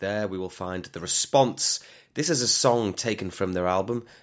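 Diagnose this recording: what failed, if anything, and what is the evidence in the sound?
Automatic gain rising in the call processing stage: from 2.15 to 4.06 s the speech and its background swell together by about 4 dB as the control, judging the input too quiet, lifts its gain. The waveform envelope and spectrogram brighten steadily across all bands, which still stop at 8 kHz.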